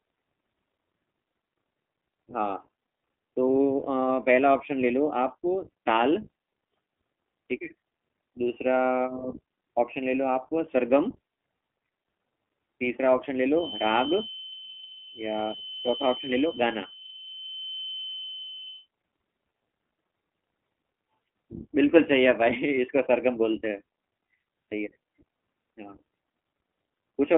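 From start to finish the speech sounds narrow and slightly rough, with a synthetic, buzzy grain that is plainly audible. The top end stops abruptly: nothing comes through above about 3.6 kHz, and the band sits roughly between 250 Hz and 3.4 kHz like a telephone line. This is iLBC codec damage. The low-rate narrowband coder rebuilds each short frame, consistent with 20 ms frames at around 15.2 kbps, and discards detail that a full-band recording would keep.

From 13.51 s to 18.89 s a thin, steady whistle at 3.1 kHz sits behind the speech, well below its level and wavering slightly in strength. It never grows or runs away, which marks it as a feedback whistle. The likely cause is a loudspeaker-to-microphone loop held just at the edge of feedback, so that one high frequency keeps ringing for about five seconds.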